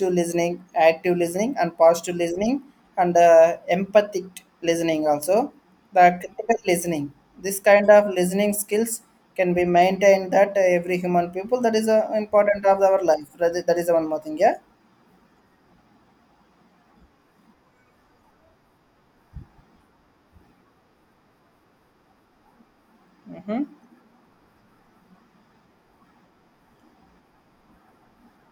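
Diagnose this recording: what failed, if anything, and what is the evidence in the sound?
No failure is audible anywhere in this speech recording.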